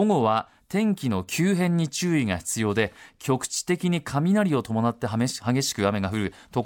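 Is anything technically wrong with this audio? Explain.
No, nothing technically wrong turns up in this speech recording, so it can be taken as it is.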